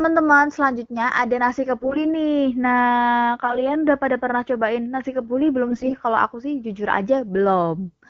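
A speech clip carried over AMR wideband, which sounds clean enough to point to the 12.65 kbit/s mode. It has three short bursts of AMR bit errors: 1.80 to 2.02 s right after "selanjutnya ada nasi", 3.44 to 3.60 s just before "udah pada pernah cobain", and 5.68 to 5.94 s after "pernah cobain nasi kebuli". In each one, flipped low-priority bits slip past the frame checksum, so the excitation pulses and the finer pitch, gain and spectral values decode wrong. The voice keeps roughly the same pitch and level but goes hoarse and gargly. The first and last bursts are the harshest, and the middle one is milder.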